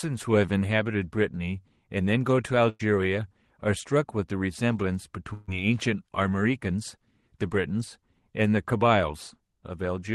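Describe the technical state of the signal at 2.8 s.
At 2.8 s the signal is inside a burst of packet loss running from 2.69 to 2.81 s. A short run of packets never arrived in time to be played. The receiver covers the gap by stretching the last good sound for about 100 ms and turning it down as it goes. The result is a brief, fading sustain in place of fresh audio. When playback picks up again, about 100 ms of the original sound is simply gone.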